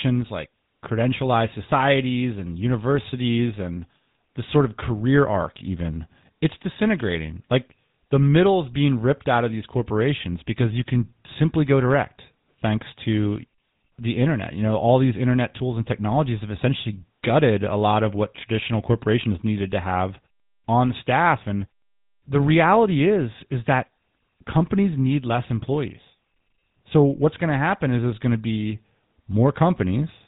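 A GSM full-rate codec has processed the speech throughout the clip. This early mobile codec models the vocal tract as a filter and excites it with a sparse, regularly spaced pulse train. The bit rate, about 13 kbps, fits the standard full-rate mode. Nothing survives above about 3.8 kHz, so sibilants lose their edge. The coarse excitation leaves a plainly audible buzzy, gravelly roughness on every voiced stretch.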